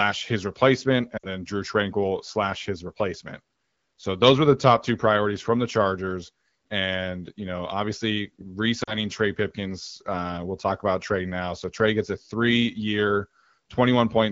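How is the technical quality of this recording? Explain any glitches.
Two short dropouts, at 1.18–1.26 s and 8.83–8.97 s, come from lost AMR speech frames, heard through wideband AMR's light coding colour. In both, corrupted frames failed their check, so the decoder repeated the last good pitch and vocal-tract settings at falling gain. The sound smears briefly, then fades fast, about 60 ms and 40 ms of concealment, before returning slightly rough. On a spectrogram, harmonics flatten into a steady, dimming band; the waveform envelope tapers sharply.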